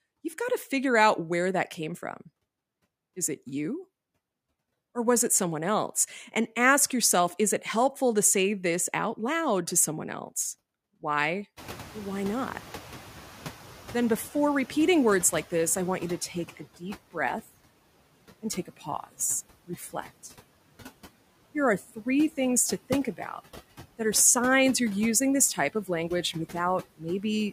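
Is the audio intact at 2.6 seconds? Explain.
No, not quite. At 2.6 seconds you're hearing noise suppressor artifacts, and they run through the whole clip rather than just that moment. The suppressor judges each frequency band frame by frame and pulls down whatever it takes for steady background, here by about 16 dB. So the noise dips in the gaps and swells back under the speech.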